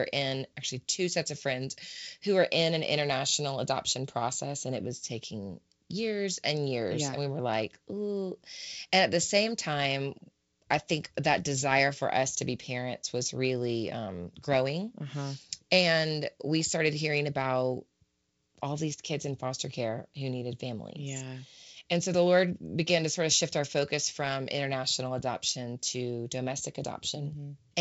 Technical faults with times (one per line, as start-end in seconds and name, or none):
none